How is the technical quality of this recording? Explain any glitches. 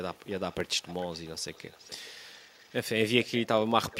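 A faint, delayed copy of the speech trails the main signal in five places: 0.14–0.2 s, 0.51–2.13 s, 2.35–2.74 s, 3.23–3.3 s, and 3.92 s to the end. It lags by about 0.42 s and sits well below the speech, from about 35 dB down to about 20 dB down, loudest in the last two scraps. This is echo leak, likely from a far end on a loudspeaker whose echo canceller let some of the returned sound through.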